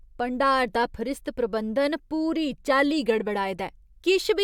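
No faults are audible anywhere in the recording.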